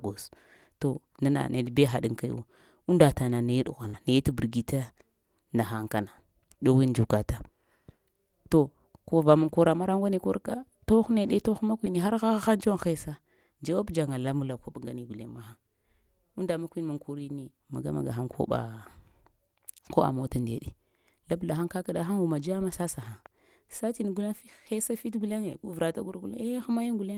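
A packet is lost at 3.83 to 3.85 s, but the next packet carries a low-bitrate copy of it, so this is a lost packet rebuilt from error correction. The decoder plays that 20 ms copy instead of leaving a gap. The speech never drops out, but this short stretch turns grainier and noisier.

At 3.87 to 3.95 s a burst of packet loss follows: several consecutive packets never arrive in time. The receiver stretches the last received sound across about 60 ms, fading it as it goes, so the speech briefly becomes a held, dulling tone or hiss. When real audio returns, roughly 60 ms of the speech has been skipped, giving an audible jump. The end of that gap, 3.93 to 3.95 s, is itself a 20 ms error-correction copy, so the return sounds rough rather than clean.

A third lost packet rebuilt from error correction falls at 4.29 to 4.31 s. The same coarse, noisy 20 ms patch appears briefly without any break in the audio.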